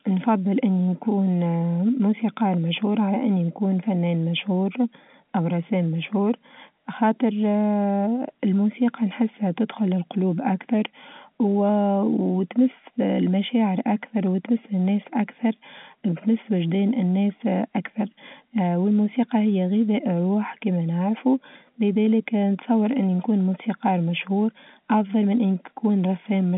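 Nothing goes wrong anywhere in this speech, which just carries the narrow band of G.711 telephone coding, from 200 Hz up to 3.6 kHz, the way an ordinary phone line would.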